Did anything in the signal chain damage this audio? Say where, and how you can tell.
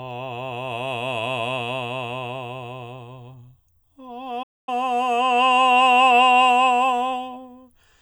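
Yes. A playback stall silences the music from 4.42 to 4.69 s, about 246 ms, then it resumes. The player likely ran out of data.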